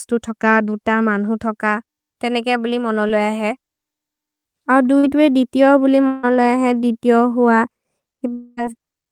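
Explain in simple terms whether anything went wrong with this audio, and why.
Short concealed packet loss at 3.07 to 3.11 s, after "मन्हु थोक तेनेके बुलि", and at 4.99 to 5.05 s, before "ए दितिओ बुलि": a few hundredths of a second of speech arrived too late, so the receiver stretched the last sound across the gap, leaving a brief smear.

Long network dropout at 6.07 to 6.25 s, after "ए दितिओ बुलि", and at 8.33 to 8.59 s: for about a fifth to a quarter of a second the speech is replaced by a continued, fading buzz, then resumes with that stretch missing. This likely happened because the connection stopped delivering audio.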